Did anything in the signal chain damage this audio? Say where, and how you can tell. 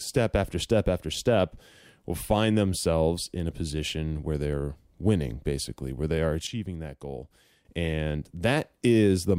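Yes. A sudden gain jump hits at 6.47 s, just after "basically where they are". The speech and background noise drop together by about 10 dB, then return at 7.65 s. Both edges are instant, with no ramp. This likely comes from a digital gain setting applied at a single sample.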